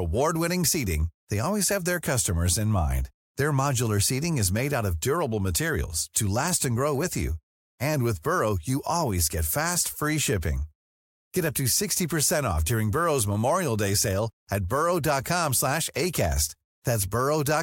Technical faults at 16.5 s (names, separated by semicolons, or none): none